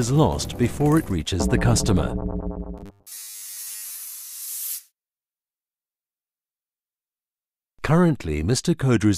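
From 2.78 to 3.98 s the sound turns into a rigid metallic buzz at 100 Hz. This is robotic sound from repeated short buffers. New audio likely arrived too late, so a 10 ms slice kept looping. Most of the sound there is repeats.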